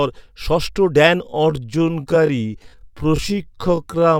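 From 1.2 s to the end, the speech abruptly slows to about 0.59 times its pace in a time-stretched section, likely from software lengthening the audio by repeating short pieces. It drags, yet the pitch stays put, unlike a plain playback slowdown, which would also deepen it.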